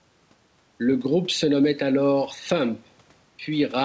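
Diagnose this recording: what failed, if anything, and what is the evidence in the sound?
Gain pumping runs through the whole recording, with the likely cause being input gain set far too high and a fast limiter or gain control in the call processing pulling it down on each loud syllable. The room noise sits about 40 dB below the speech, and the gain swings by roughly 5 dB. On a waveform the envelope looks flattened. On a spectrogram nothing shows above the 8 kHz ceiling of the G.722 path.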